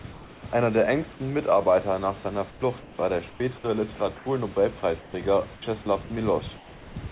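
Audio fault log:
0.12–0.44 s, 2.5–3.4 s, 3.96–4.26 s, 6.56–6.96 s: comfort noise in place of the background. The room noise, about 20 to 22 dB below the loudest sound, turns steady and featureless, about 2 dB quieter at 0.12 s and about 4 dB quieter at 6.56 s. The likely cause is discontinuous transmission, with the receiver synthesising shaped noise during pauses.
3.96–4.0 s: sound dropped by the voice detector. About 20 ms of quiet sound is lost at the start of the comfort-noise stretch, replaced by synthetic noise. The sender's detector likely judged that low-level sound as background and stopped transmitting too early.
5.0–5.86 s: sound chopped by the voice detector. Across this span, about 260 ms in total is replaced by comfort noise. Quiet edges vanish, likely because the detector toggles transmission on and off repeatedly within a short stretch.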